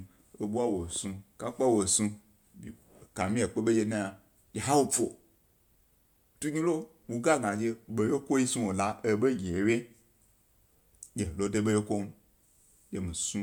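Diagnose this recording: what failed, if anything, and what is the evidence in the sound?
Nothing failed here: listening through the speech, there's no fault at any stage of the chain to point to.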